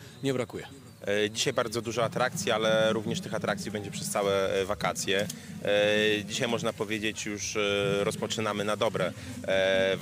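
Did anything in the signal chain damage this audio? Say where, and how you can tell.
No, nothing in the signal chain damaged this audio.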